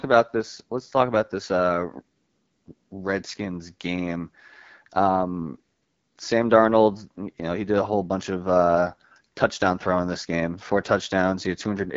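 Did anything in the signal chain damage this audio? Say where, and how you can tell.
Yes. The codec stage is at fault: the whole clip carries AMR wideband (HD Voice) coding, with nothing above 7.5 kHz and a plainly rough, raspy texture on the speech, which fits a low 8.85 kbit/s mode where the pulse-excited vocal tract model runs short of bits.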